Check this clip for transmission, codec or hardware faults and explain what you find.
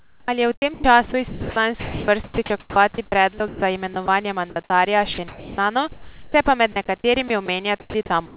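One fault runs through the whole recording, from 0.0 to 8.37 s: sound chopped by the voice detector. The sender's gating repeatedly cut transmission, so about 2.9 s of sound became synthetic comfort noise, likely from an over-aggressive detector. Speech sounds clipped, and room noise sits about 40 dB below speech. The band ends at 4 kHz, which fits the G.711 call codec.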